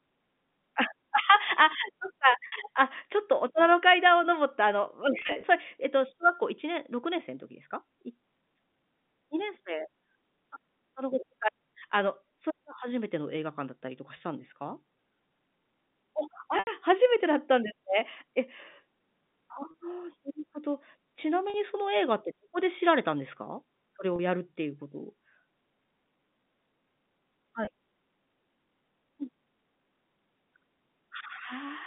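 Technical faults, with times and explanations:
2.47–2.52, 5.19–5.43, 14.17–14.20, 16.59–16.67, 19.71–19.74, 21.50–21.54, 24.16–24.19, 27.65–27.67 s, packet loss with pitch repetition: gaps of 20 to 80 ms, fitting 10 ms packets, are bridged by repeating the last pitch period, giving a brief held, buzzy tone on the short gaps, while the 80 ms gap fades into silence before the speech cross-fades back, rather than the clicks of plain dropouts. At 5.19 s, 140 ms is lost in short runs scattered over 240 ms, heard through the narrow telephone band.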